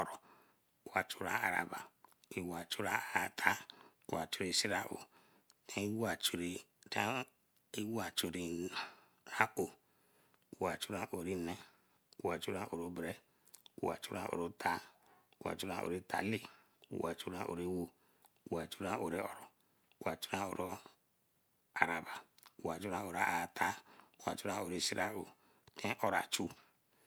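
No technical faults can be heard anywhere in the speech recording. Nothing in it calls for a timestamp or a diagnosis.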